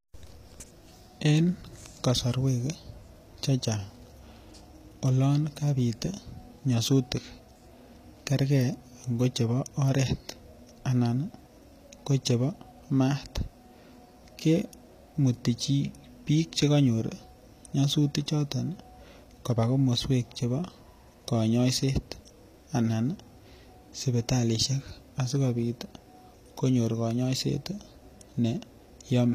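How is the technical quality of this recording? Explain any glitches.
The recording carries plainly audible codec damage from start to finish. The speech sounds like it likely passed through HE-AAC compression. Nothing is present above about 14.9 kHz. The treble that remains is synthetic. The codec encodes only the lower spectrum and rebuilds the top by copying lower bands upward under a coarse envelope. That fits a low bitrate near 24 kbps. The rebuilt harmonics don't line up with the real ones, so s sounds come out gritty, metallic or lispy.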